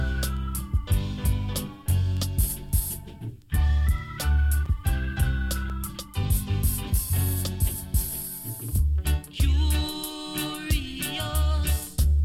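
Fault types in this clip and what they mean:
Block of digital silence: output briefly drops to silence, 5.3 ms then 1.7 ms, heard as ticks; hard edges without any fade, unlike a smoothed dropout.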